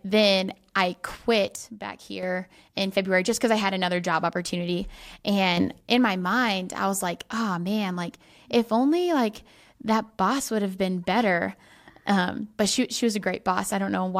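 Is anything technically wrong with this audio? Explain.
Yes. A sudden gain jump occurs at 1.56–2.23 s, right after "then I", where the level drops by about 7 dB, and again at 5.57–5.81 s, just before "in my mind I", where it rises by about 7 dB. The likely cause is a gain setting applied between samples without a ramp, so the speech and the background noise step in level together.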